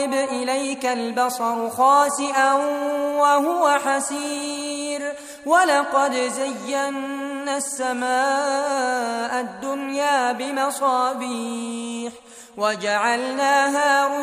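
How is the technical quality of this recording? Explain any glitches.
The recording has one clear fault, near the end. From 11.38 s to 14.22 s there is crude rate conversion. Samples were linearly interpolated without a proper filter, which fits a 48 kHz to 44.1 kHz change. The repeating error sits well below the sound. It adds a faint, gritty, inharmonic fizz that rides on loud and bright passages.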